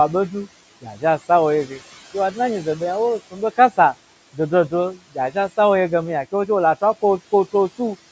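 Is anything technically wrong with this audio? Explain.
Yes, the speech carries two faults from a noise suppressor.

Noise suppressor artifacts run through the whole clip. The room noise, which sits about 19 dB below the speech, dips away in the gaps and swells back underneath each phrase. The suppressor estimates the steady background and turns down each frequency band it judges to be noise, frame by frame, here by about 17 dB.

Speech cut by the noise suppressor appears from 0.81 to 1.03 s, just before "a sa". The sound there goes faint and swallowed, dropping by about 14 dB at its deepest, over roughly 0.15 s in total. The suppressor mistook these quieter speech components for background and pulled them down along with the noise, so that stretch loses body.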